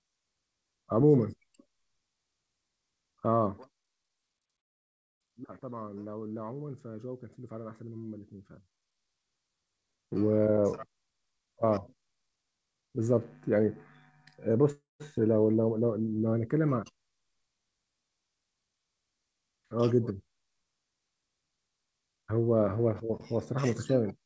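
From 3.46 to 3.98 s there is zipper noise. The level falls by roughly 15 dB. It does not glide down. It moves in coarse steps, about 100 per second, with no smoothing between them. Each step puts a tiny click into the waveform. Together the clicks form a fine ticking buzz that rides on the speech while the level drops.

A call audio freeze follows at 4.60 s and lasts until 5.23 s. The speech stops and about 0.6 s of near-silence fills the gap. The likely cause is delayed packets that left the jitter buffer empty. When the audio returns, it picks up where it stopped. Little or nothing is lost. The sound simply arrives about 0.6 s later than before.

From 10.46 to 13.13 s there is a jitter buffer speed-up. The speech runs at about 116% speed, and the pitch stays the same. Short pieces of a pitch period or so are cut out again and again, roughly 0.4 s in total. This drains the extra delay built up in the buffer. 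The speech sounds hurried.

A second call audio freeze comes at 14.72 s and lasts until 15.03 s. About 0.28 s is filled. Around 0.18 s of it is silent. This again likely comes from late packets. The audio resumes without loss.

A short jitter buffer speed-up runs from 22.08 to 22.32 s. The speech plays at about 112% speed, and only about 40 ms is removed. It is heard as a brief rush.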